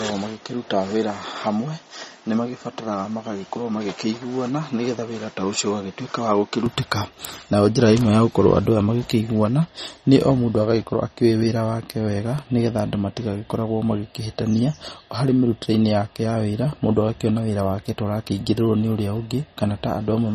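From 0 to 6.66 s the speech is dull and boxy, likely from the input switched to a poorer device. The spectrogram is empty above 7.6 kHz, the waveform is about 5 dB quieter, and a noise floor sits roughly 30 dB down. The switch back has no gap.

Throughout, watery, swirly smearing points to MP3 compression at a low bitrate, which fits about 32 kbps. The spectrogram shows a hard ceiling at 15.7 kHz and flickering holes.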